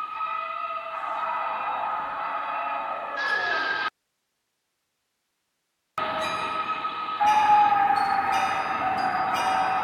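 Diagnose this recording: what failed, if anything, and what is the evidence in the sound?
An audio dropout to a faint residue runs from 3.88 s to 5.98 s. The music cuts out abruptly mid-flow for about 2.1 s and returns just as suddenly. The gap holds only hiss, roughly 55 dB below the music. That hiss shows the path after the break stayed live while the wanted signal vanished. The likely cause is an intermittent break in the analogue wiring, such as a loose connector, rather than a converter or playback stall.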